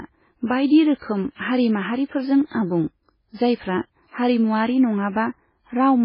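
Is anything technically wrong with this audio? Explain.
Yes, there's a clear problem running through the whole speech clip. Everything above about 5.3 kHz is simply gone, so it sounds dull and boxed-in, and the heavy watery, swirly texture around the speech points to likely MP3 compression at a very starved bitrate, something like 16 kbps. With so few bits, the encoder chops the treble at a fixed point and drops quieter frequency detail, which flickers in and out frame to frame and smears the consonants.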